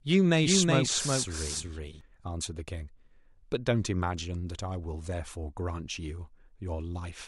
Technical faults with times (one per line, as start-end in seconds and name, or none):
0.41-2.01 doubled audio track